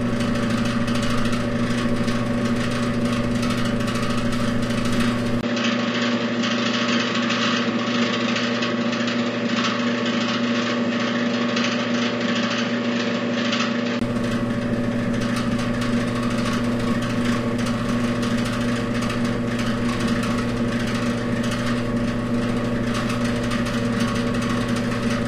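A recording of everyday sounds where the input likely switched to a poorer device from 5.41 to 14.01 s: after a brief gap at 5.41 s, nothing above 7.6 kHz survives, a faint new noise floor appears, and the level barely changes.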